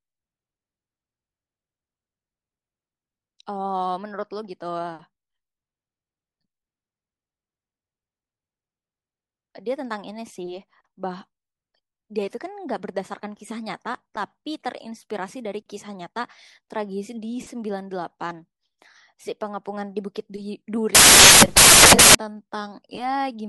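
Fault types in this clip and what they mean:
Samples built from the wrong bytes: bytes misassembled into samples, low bits becoming the large part, heard as loud, harsh broadband noise replacing the speech from 20.95 to 22.15 s.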